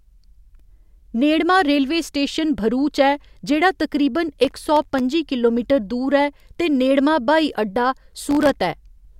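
Processor overload crackle at 4.45–5.00 s and 8.31–8.56 s: missed sub-millisecond buffers drop to silence, causing gritty tearing that shows as waveform gaps and broadband spectrogram streaks.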